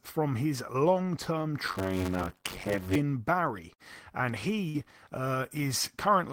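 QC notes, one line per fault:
1.67–2.96 s, block size mismatch (padded): right after "from his long term", zero-padded short blocks add a 94 Hz buzz and slow speech to 0.625x with the timbre unchanged. That fits a 512-sample read block.
3.73–3.82 s, burst of packet loss: 57 ms of the last sound stretched and fading to cover lost packets, then speech resumes with about 60 ms skipped.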